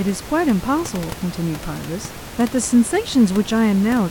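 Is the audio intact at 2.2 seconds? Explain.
Yes, the audio is intact at 2.2 seconds, with only the room's own background noise sitting about 15 dB below the speech.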